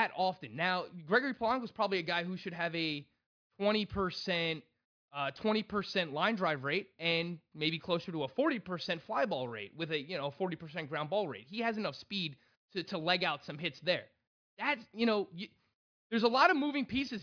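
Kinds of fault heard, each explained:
No technical fault can be heard anywhere in the recording. There is nothing to list, so no kind of fault is explained here.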